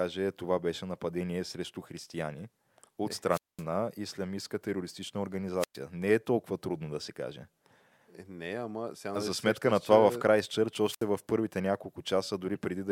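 Wireless microphone squelch dropout: the FM signal fades until the receiver's squelch mutes it. A burst of hiss then near-silence falls at 3.29–3.64 s (mute about 0.21 s), 5.58–5.78 s (0.11 s) and 10.83–11.07 s (69 ms).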